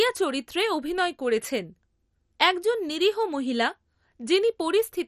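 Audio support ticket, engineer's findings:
MP2 compression artefacts, throughout. Speech dull and granular, gurgling distortion, no content above 15 kHz. Likely MPEG Layer II encoding starved of bits, consistent with roughly a 56 kbps rate: upper sub-bands switched off or flickering in and out, remaining bands coarsely quantised. Heavy damage across the whole clip. Suggest re-encode at a higher bitrate or a newer codec.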